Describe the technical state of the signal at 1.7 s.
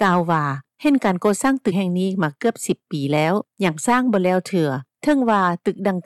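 Compressed frames skipped at 1.71 s: a short run of coded frames never reaches the output, so the audio jumps forward by about four frames, roughly a tenth of a second of material lost. The jump size fits a frame length of 21.3 ms. At the seam the sound resumes slightly ahead of where it left off.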